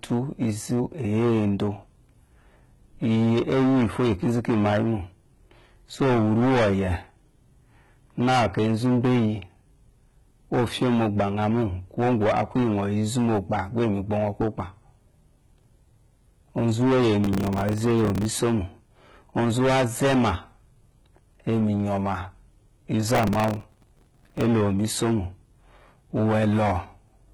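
From start to finish the speech is driven into hard clipping. The signal runs about 20 dB past what the chain can pass, so roughly a tenth of the samples hit the ceiling and are sliced flat. Those squared-off tops spray harmonics high into the spectrum, giving a constant harsh fuzz on every loud syllable. Unlike codec damage, this distortion follows loudness: it thickens on louder moments and thins on quieter ones.

Also present throughout is a smeared, synthetic treble, most likely from heavy HE-AAC compression at a bitrate that sounds around 16 kbps. The codec keeps only the lower band and fakes the top by copying lower content upward under a coarse envelope. The highs stay bright but sound artificial: s sounds turn gritty and lispy, with a metallic sheen. This graininess persists at any level, which separates it from the clipping fuzz.

From 17.24 to 18.25 s, and again from 23.08 to 24.46 s, processor overload crackle tears through the sound. 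The processor keeps missing the deadlines for buffers that sound about 3 ms long, dozens of times in the first burst and around a hundred in the second. Each miss replays a shard of old audio with hard edges. The result is a dense, rapid crackle confined to those windows, unlike clipping, which tracks loudness and never stops.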